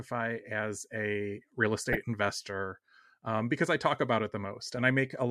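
This speech clip has DAB burbling twice: from 1.81 to 1.98 s, between "as a real" and "investor um because I", and from 4.74 to 4.83 s, right after "I talk about it". Bit errors in weak reception, at a rate of a fraction of a percent, slip past error correction into the MP2 data. Corrupted scale factors make single sub-bands jump for up to a frame. On a spectrogram these show as blocky, isolated frequency bands flaring briefly, a run fitting roughly nine frames and then four. The waveform shows short, uneven bursts.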